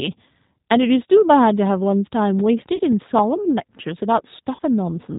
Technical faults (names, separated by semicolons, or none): G.729 codec; VoIP packet loss concealed by the speech codec